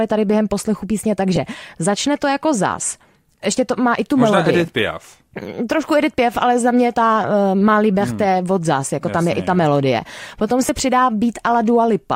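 Speech with two brief noisy smears, at 1.36 s and at 10.67 to 10.69 s, where the tone blurs for an instant. These are lost LE Audio frames: the LC3 decoder filled 10 ms and then 20 ms by repeating the previous spectrum with random signs, which fits one and then two missing 10 ms frames. The light lossy compression beneath leaves only a faint trace.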